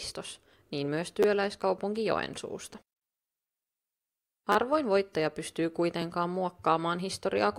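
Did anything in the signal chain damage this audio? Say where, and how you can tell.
Yes, a repeated buffer at the driver or buffer stage, at 1.23 to 1.25 s and 4.52 to 4.56 s. Fresh audio arrived late, so a 10.67 ms chunk, which fits a 512-sample buffer, replayed two then three extra times with hard joins, heard as brief buzzy stutters.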